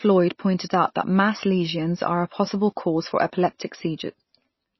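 Throughout the speech, nothing is present above 5.8 kHz and the sound is watery and swirly, with chirping sibilants. This is likely MP3 compression at a starved bitrate, around 24 kbps. The encoder truncates treble and drops weak frequency lines frame by frame.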